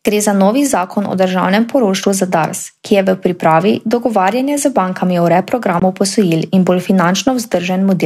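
At 5.80 s the speech cuts out and returns at 5.82 s. About 19 ms of sound is simply gone. This is most likely a Bluetooth dropout. A packet of audio failed to reach the headphones in time, so the output fell silent until the next good one arrived. The short gap fits a single lost packet. When the speech resumes, it has moved on, as though it kept playing through the hole.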